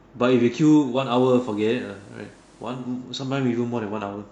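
At 0.90 s the speech blends from digital radio to analogue FM over about 0.28 s. The receiver lost its digital signal, adding hiss roughly 35 dB down at unchanged level, a faint broadband floor on a spectrogram, until it blends back at 2.91 s.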